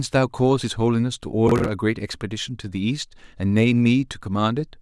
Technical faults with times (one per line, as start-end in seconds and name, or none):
1.48-1.69 processor overload crackle